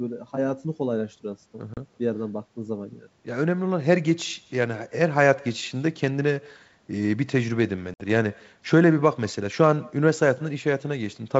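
Throughout the speech, every phrase is trailed a moment later by a faint, thin copy, about 28 dB down and roughly 150 ms behind. That is echo with no canceller: the far end's loudspeaker feeds its microphone, and nothing removes the returning signal after the network round trip.

At 1.74 to 1.78 s a hard-edged gap cuts out 30 ms of sound, and the speech comes back slightly distorted before settling. This is packet loss on an ADPCM call. The missing audio, which fits a few lost packets, was replaced by silence, so the decoder's predictor and step size drifted away from the sender's and took some tens of milliseconds to resynchronise.

A longer hole of 60 ms, from 7.94 to 8.02 s, suggests several packets dropped. It has the same abrupt edges and the same brief distortion on recovery. The wideband band-split coding underneath keeps speech clear up to 7 kHz with only faint upper-band hiss, which fits G.722 at its full rate.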